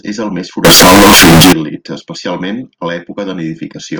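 Float read as integer from 0.65 to 1.53 s, after "és el més": likely 32-bit floats read as integers, so speech turns loud, harsh, near-square, with noise as loud as speech.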